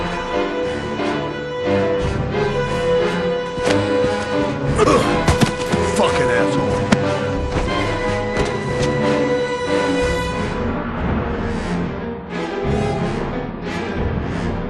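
No technical faults can be heard at any point in the audio, and the signal stays steady and intact for its whole duration.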